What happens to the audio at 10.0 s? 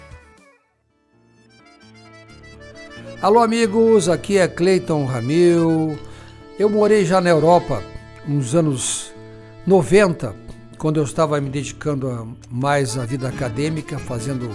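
Nothing goes wrong at 10.0 s; the audio plays through that moment intact, with no dropout, click, glitch or other fault.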